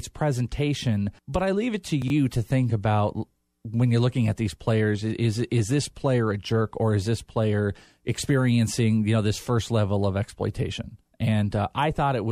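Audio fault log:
2.02–2.1 s, chunks out of order: one 20 ms block arrived late and played three blocks after its proper place, right after "I leave it to" and before "to think about when". Nothing is missing, but the shuffled order smears that moment and leaves three hard joins.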